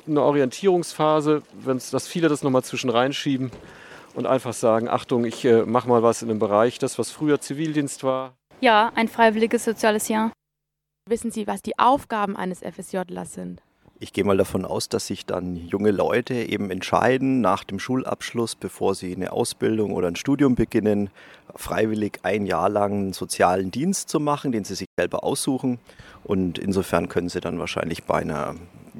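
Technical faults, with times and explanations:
24.85–24.99 s, playback stall: the sound cuts off abruptly mid-flow and the output drops to silence for a gap of 120 ms before the audio resumes. The cause is likely that the player ran short of buffered data or its audio thread was briefly blocked, so nothing reached the output until it recovered. The sudden stop in mid-flow and the silent gap are what make it sound like an interruption in delivery.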